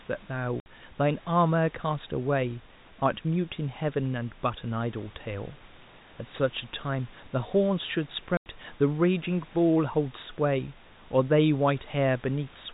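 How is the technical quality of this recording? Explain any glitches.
The recording has two short dropouts caused by packet loss filled with silence. One comes at 0.6 s and lasts 60 ms. The other comes at 8.37 s and lasts 90 ms. Both lengths fit lost 30 ms packets. The receiver played silence in their place. The speech stops abruptly at hard edges. The speech sits in a telephone band with nothing above 4 kHz, and room noise lies about 24 dB below it.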